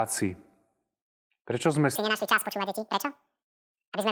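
From 1.96 s to the end, a section at the wrong speed runs at 2.0 times normal: the speech turns hurried and chipmunk-like, pitch jumping roughly ten semitones, likely from resampling against a wrong clock. A spectrogram shows harmonics and formants suddenly shifted upward and widely spaced, and the waveform shows compressed syllables.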